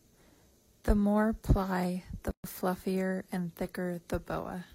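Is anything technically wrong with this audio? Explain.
Yes, there's a gap at a join of encoded pieces. Right after "more ply the", at 2.31 s, the speech drops into a 130 ms silence and picks up again at 2.44 s with "fluffier and", carrying on exactly where it stopped. The pieces were encoded separately and butted together untrimmed, so the encoder's start-up delay and the end-of-file padding both stay in. The codec smears the edges, so the truly silent part is a bit shorter than the gap.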